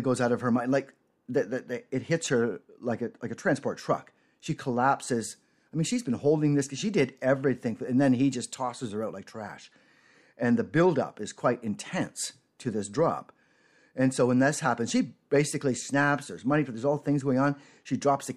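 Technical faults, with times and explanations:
Nothing stood out on listening to this speech recording.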